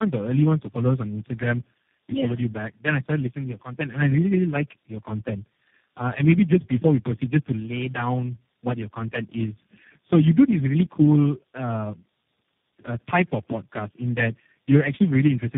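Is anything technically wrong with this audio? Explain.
Yes. Throughout, the sound shows tandem speech coding: it passed through several speech codecs in a row, likely about four, each re-encoding the previous codec's damage. The result is rough, muffled, warbly speech with nothing above 3.7 kHz.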